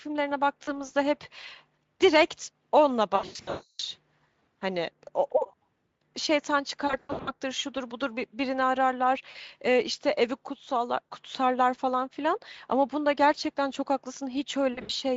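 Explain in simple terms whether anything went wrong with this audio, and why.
Yes, something went wrong: VoIP packet loss concealed by the speech codec. Chunks of the call's data never arrived, so the decoder guessed by repeating and fading its last bit of speech. Around 0.63 s, 9.31 s and 14.73 s this causes brief buzzy or smeared patches. The worst are at 3.15–3.81 s, where over half a second went missing, and 6.87–7.32 s, where the voice turns buzzy or noisy and weak before recovering.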